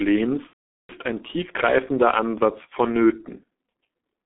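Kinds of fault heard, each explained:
G.723.1 codec: The whole clip passes through a low-rate telephony codec running near 6 kbit/s, with the band held to roughly 250 Hz to 3.6 kHz. Damage is heavy. The speech sounds muffled and hoarse, and consonants blur because the coarse voice model updates slowly.
VoIP packet loss concealed by the speech codec: From 0.47 to 0.92 s, about 420 ms of packets go missing. The decoder fills the gap by repeating its last pitch and filter at falling gain. The speech smears briefly into a fading sound, then is muted for the rest of the gap, and it stays weak or distorted as the audio resumes.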